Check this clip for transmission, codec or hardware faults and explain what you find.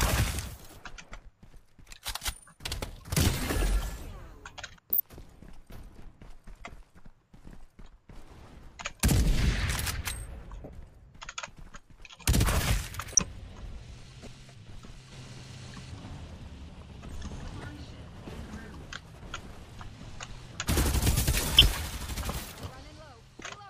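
One fault type recurs: corrupt frame decoded. Damaged compressed frames were played anyway, misplacing energy across frequencies. Brief chirps or noise bursts occur at 4.92–5.00, 10.64–10.69, 13.12–13.19, 14.22–14.32, 17.62–17.64 and 21.58–21.62 s. The ones at 13.1 and 21.6 s are loudest, with error peaks around -5 dBFS.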